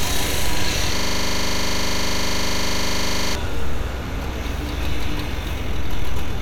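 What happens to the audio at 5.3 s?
Nothing goes wrong at 5.3 s: the sounds carry on intact through that moment, with no dropout, click, distortion or other fault audible.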